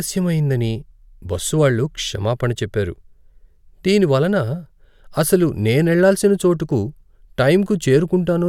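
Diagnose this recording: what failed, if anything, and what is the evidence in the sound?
Nothing in this speech recording points to a failure. No stage of the chain, from wiring and conversion through to playback, leaves any audible trace.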